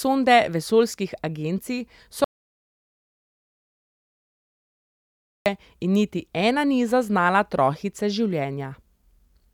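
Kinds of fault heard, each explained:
Audio dropout to silence: Right after "vesoljskih agencij" the speech stops dead at 2.24 s and returns abruptly at 5.46 s, leaving about 3.2 s of silence. Input was likely lost while recording continued, writing silence. Unlike a noise gate or a natural pause, no room tone or background hiss remains in the gap, and both edges are hard cuts in mid-flow rather than fades, so whatever came between is simply missing.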